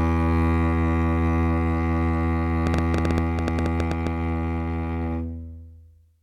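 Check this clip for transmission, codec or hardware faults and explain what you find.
One fault stands out in this music clip: a train of clicks from 2.67 s to 4.08 s. About fifteen short pulses of similar shape arrive at roughly 10 per second, unevenly spaced. The likely cause is electrical interference or a faulty connection or power supply. Each pulse jumps about 15 dB above the music and is heard as an uneven ticking on top of it. A waveform shows thin vertical spikes, and a spectrogram shows matching full-height broadband stripes at irregular intervals.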